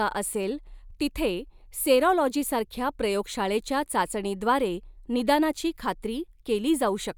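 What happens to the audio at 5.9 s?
Nothing goes wrong at 5.9 s; the speech carries on intact through that moment, with no dropout, click or distortion.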